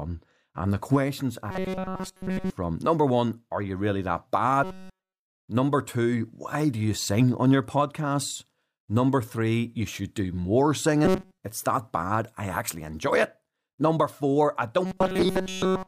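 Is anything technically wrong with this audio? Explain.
Yes. There is robotic sound from repeated short buffers at 1.51 to 2.50 s, 4.64 to 5.26 s after "are you really that", 11.05 to 11.38 s after "you should do more", and 14.86 s to the end after "four I". The speech becomes a rigid, metallic buzz locked at 188 Hz that still loosely tracks the words. In the third stretch most, but not all, of the sound is affected. The likely cause is new audio arriving too seldom, so the playback fills the gap by repeating a fragment of about 5.3 ms and skips the real audio.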